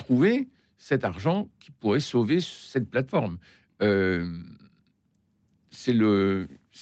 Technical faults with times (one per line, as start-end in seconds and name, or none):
none